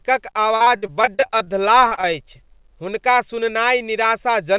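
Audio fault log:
0.56–1.50 s, repeated packet loss (robotic sound): The sound turns choppy here. Eleven gaps fall in under a second, the longest 60 ms. About 300 ms of audio never arrived, roughly a third of the stretch. Each gap was patched by stretching the last stretch of sound forward. The patches repeat a frozen waveform, so the result sounds robotic. The next gap comes before the sound can settle.
1.87–1.93 s, 1.95–1.99 s and 2.01–2.05 s, short concealed packet loss: Three brief holes fall in quick succession, lasting 40 ms, 20 ms and 20 ms. Each was filled by extending the preceding sound, then blended back into the real signal. Each one is heard as a short smear or wobble. The whole clip has nothing above 4 kHz, which fits a narrowband telephone codec such as G.711.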